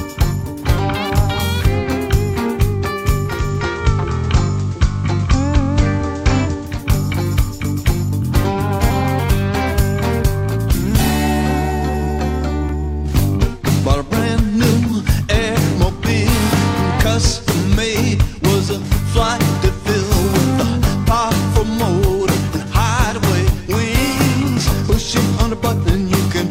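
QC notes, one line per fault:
3.26–6.86 s, digital radio blending to analogue: the receiver lost its digital stream and cross-faded over about 320 ms to the station's FM broadcast, returning to digital at 6.86 s. A hiss floor appears, roughly 35 dB under the programme, and the level shifts by about 1 dB.
12.19–15.69 s, periodic USB or driver dropouts: every 0.5 s the audio path stalls and a gap of roughly 2 ms is replaced with silence, about seven times across this stretch. Each brief hole cuts the waveform abruptly, so it is heard as a tick. The even spacing points to a background task repeatedly blocking the USB bus or audio driver at a fixed interval.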